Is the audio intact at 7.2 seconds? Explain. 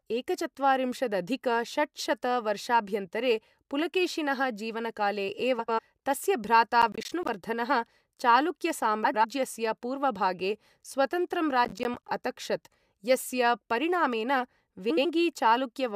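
No. From 6.82 to 7.29 s there is processor overload crackle: the processor repeatedly fails to deliver its audio buffers, around ten short blocks of roughly 10 ms each, on time. Each miss drops to silence with hard edges, so the speech breaks into a gritty, tearing crackle.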